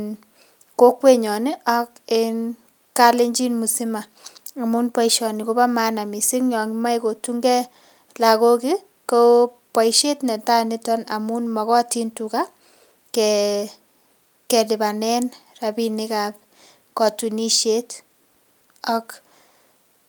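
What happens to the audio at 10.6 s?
Nothing goes wrong at 10.6 s; the speech carries on intact through that moment.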